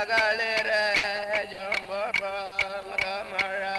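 From 0.97 to 1.88 s there is repeated packet loss, giving a choppy, robotic sound. Four gaps are bridged by extending the preceding sound, about 160 ms in total, with the longest gap 60 ms. Unlike a single stall, about 120 ms of audio is actually lost.

At 2.45 to 2.54 s comes a short stall from a late packet. The jitter buffer ran dry, so the last sound is held for about 60 ms, heard as a brief buzz or drag, and then resumes exactly where it stopped, with nothing skipped.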